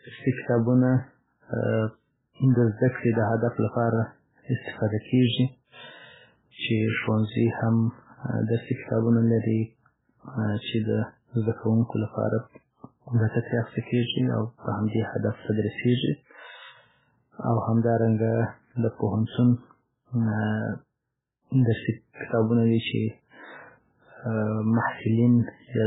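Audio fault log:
Throughout, MP3 compression: the encoder was likely starved of bits, around 8 kbps, so it discards everything above 3.8 kHz and zeroes weak frequency lines frame by frame. The speech sounds dull, watery and swirly, with metallic chirps on s sounds and smeared attacks.
15.41 to 15.45 s, pre-echo: quantisation noise meant for a sharp attack is spread across its whole transform block, filling the quiet moment before the onset. About 35 ms of hiss leads into the attack, which sounds soft and smeared.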